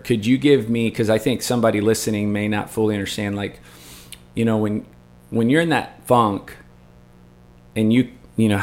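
A mains buzz tied to 60 Hz power runs under this speech for the whole clip: sharp switching spikes from a dimmer, rectifier or unshielded line, arriving twice per cycle, spray harmonics into kilohertz range, giving a steady raspy buzz roughly 30 dB below the speech.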